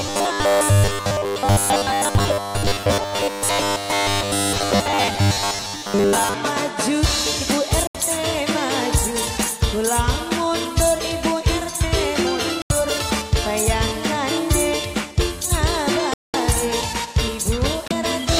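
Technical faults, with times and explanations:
0.01–6.34 s, robotic sound from repeated short buffers: New audio likely arrived too seldom, so playback kept refilling the gap by replaying a tiny slice while most of the real sound was skipped. Repeating every 10 ms stamps a fixed 100 Hz buzz onto the audio, giving it a rigid, metallic character.
7.87 s, 12.62 s, 16.14 s, 17.88 s, Bluetooth stall: Packets were likely held up by interference, draining the headphones' buffer until resent data arrived. Each time the sound drops to silence, for 76 ms, 82 ms, 204 ms and 30 ms, then resumes where it stopped or slightly later.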